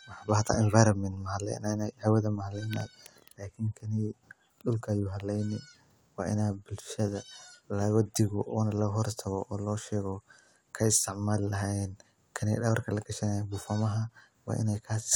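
No technical faults are audible.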